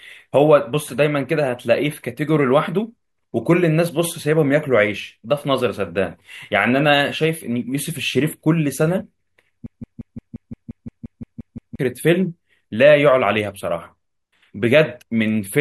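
A broken-record loop runs from 9.66 to 11.79 s: a 0.17 s fragment of the speech repeats exactly, back to back, twelve times, giving a rapid stutter. The playback chain likely stalled and kept resending its last fragment, so the speech due there is lost.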